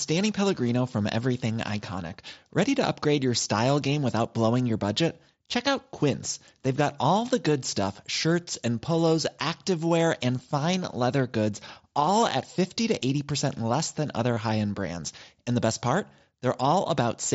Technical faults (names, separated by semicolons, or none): concealed Bluetooth headset packet loss